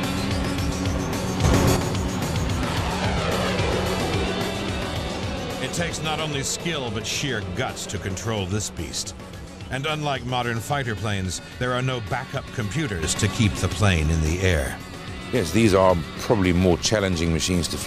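The level steps up by about 7 dB at 1.44 s, drops back at 1.77 s, then jumps up again by about 7 dB at 13.03 s and stays raised to the end. These are sudden gain jumps, likely from a digital gain setting applied instantly without a ramp. Unlike automatic gain control or compressor pumping, each change is a clean step with no attack or release, and the background noise rises and falls by the same amount as the sound.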